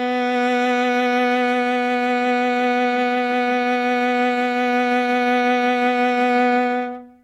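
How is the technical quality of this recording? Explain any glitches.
No glitches can be heard.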